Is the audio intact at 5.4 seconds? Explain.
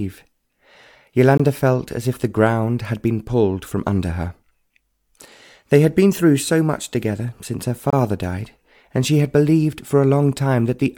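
Yes, the audio is intact at 5.4 seconds, with no dropout, click, distortion or other fault to be heard at that point.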